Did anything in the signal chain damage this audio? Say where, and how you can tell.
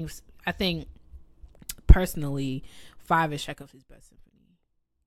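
Yes. Zipper noise appears from 3.44 to 3.81 s, just after "personally five is", where the level falls by roughly 20 dB in 5 dB steps at about ten per second. A gain stage in the buffer or processing path is applying the change in coarse jumps with no smoothing, so each jump leaves a small click and the drop ticks rather than glides. Dropout clicks, by contrast, would come with gaps.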